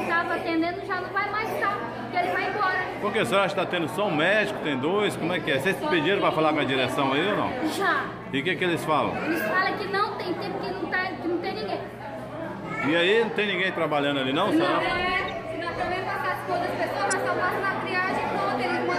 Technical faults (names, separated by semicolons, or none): corrupt frame decoded